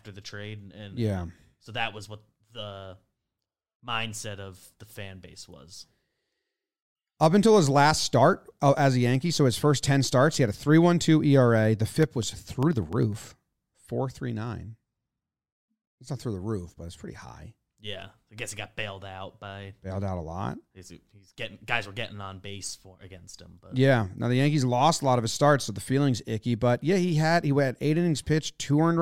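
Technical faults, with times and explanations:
11.93 to 13.73 s, periodic USB or driver dropouts: the speech carries a steady train of small ticks, about twenty of them, spaced 0.1 s apart, so ten per second, heard only where there is sound. Each tick is a tiny gap, around half a millisecond, where the signal drops abruptly to silence and returns. The rigid spacing points to something on the USB bus or in the audio driver stalling the stream at a fixed interval.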